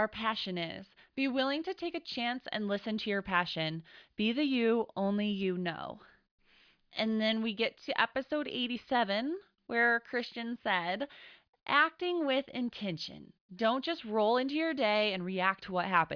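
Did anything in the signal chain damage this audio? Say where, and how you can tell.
No, none of the stages from capture to playback left any audible damage on this speech recording.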